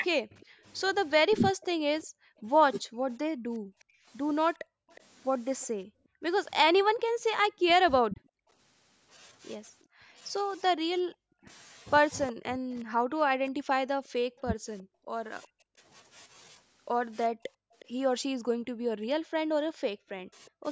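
From 0.17 to 3.93 s there is speech suppressed in double talk. The level dips in bursts totalling about half a second, at worst by something like 40 dB. This is likely an echo canceller that couldn't tell the near talker from loudspeaker sound and pulled both down. On a waveform the envelope shows sudden notches. On a spectrogram the upper bands vanish in patches. Above 8 kHz the spectrogram stays empty throughout, which is the call's own band limit.

An echo leak runs from 0.4 to 5.67 s. A faint copy of the voice trails it by 363 ms, roughly 30 dB below it. This is likely residue the canceller failed to remove, sent back down the line. On a spectrogram it looks like weak, smeared harmonic traces offset by about a third of a second from the originals.

From 0.63 to 10.15 s comes background gating by the echo canceller. The room sound drops by up to about 40 dB for brief moments, around two seconds in total, while the canceller clamps the microphone. 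It then returns. On a waveform the noise floor falls nearly flat and then snaps back. On a spectrogram the low-level wash goes blank in vertical strips.

Double-talk suppression returns from 7.63 to 20.65 s, covering around four seconds of gaps. The echo leak resumes from 9.81 to 20.5 s, again 363 ms behind the voice, now only about 20 dB down and more plainly audible. Gating recurs from 14.85 to 17.73 s, with dropouts totalling roughly 0.3 s.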